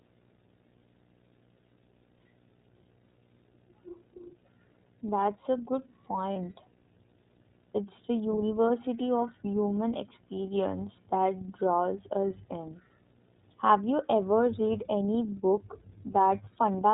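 Throughout, there's a video or display buzz: a screen or video cable leaking a 60 Hz field-rate buzz with hash on top, sitting quietly well under the speech.

The whole clip also has the iLBC codec's narrowband sound, with nothing above 4 kHz. The speech comes through clear but plainly rough and synthetic, which fits 30 ms frames.

At 6.33 s, right after "a good", there's one lost iLBC frame, about 30 ms. The decoder fills the gap by repeating the last pitch cycle, which sounds like a brief held, buzzy vowel, and the voice is back almost immediately.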